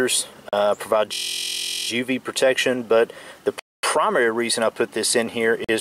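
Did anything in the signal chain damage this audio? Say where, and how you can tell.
Yes. Bluetooth stalls occur from 0.49 to 0.53 s, 3.59 to 3.83 s and 5.64 to 5.69 s, at the playback stage. The sound drops to dead silence for about 38 ms, 240 ms and 44 ms, then resumes. This points to a likely wireless link problem: interference delayed packets, the headphones' buffer ran empty, and output stopped until retransmitted data arrived. The longest gap, near 3.6 s, reflects the longest wait for those resent packets.

A system hang loop runs from 1.14 to 1.88 s, at the driver or buffer stage. A single 23.22 ms slice of sound repeats 32 times, producing a steady buzz at 43.1 Hz rather than the expected audio. That loop length fits a 1024-sample buffer: the host or driver froze while the audio hardware kept replaying the same ring buffer. Little or no audio seems lost afterwards, as playback continues from where the loop began.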